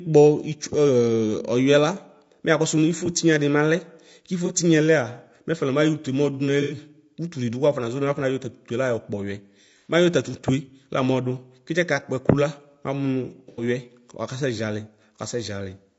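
Right from the start the speech sounds rough and grainy, with noise filling the gaps between harmonics and a thin, slightly synthetic top end. That's most likely low-delay AAC compression (AAC-ELD) at a bitrate around 32 kbps. Its short frames smear pitch detail, and at that rate the damage is plainly audible.

Then there's AAC frame loss with concealment. The decoder patches missing audio from the last good spectrum, leaving a smeared, phasey blip. It happens first at about 4.46 s, a short patch of roughly 30 ms. Longer 90 ms patches follow at 6.62 s, 9.77 s and 13.49 s, each sounding like three frames lost.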